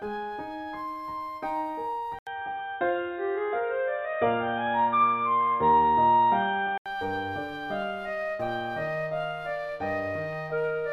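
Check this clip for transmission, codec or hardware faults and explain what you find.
One fault stands out: the input switched to a poorer device. From 2.19 s to 6.86 s the sound turns dull and boxy. Nothing is left above 3.8 kHz. A gap of about 80 ms marks the switch. The level shifts by a few decibels. A new, faint background noise sits well below the signal. The likely cause is the system changing to a narrower-band microphone or headset profile. Full bandwidth returns at 6.86 s.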